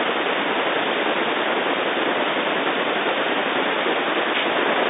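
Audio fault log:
Nothing stood out on listening; the speech sounds like ordinary telephone-band audio, with nothing above 3.8 kHz.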